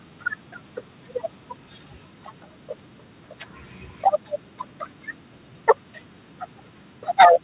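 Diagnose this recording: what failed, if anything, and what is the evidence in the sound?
At the converter stage, the microphone's input level was likely set too high, causing microphone overload. From 7.2 to 7.27 s the loudest speech peaks drive about 5 dB past full scale, and around a tenth of the samples there are flattened, giving a harsh, crackly edge.

In call processing, the software likely reacted to that clipping by stepping the microphone volume down. At 7.25 s the speech and the background both drop suddenly by about 2 dB. The G.711 call path, with nothing above 4 kHz, is working normally.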